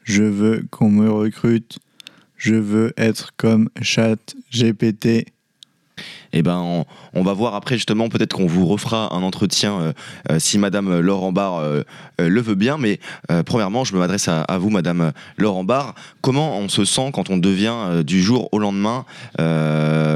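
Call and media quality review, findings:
Single sharp clicks at 10.57 s and 18.36 s. Likely dropped samples: a fraction of a millisecond missing from the stream, so the waveform jumps straight to a later value. Far too brief to remove audible sound. Waveform shows an abrupt step discontinuity at each point. Spectrogram shows a thin full-band vertical line at each time. Probable component is the capture or playback buffer path briefly losing a handful of samples.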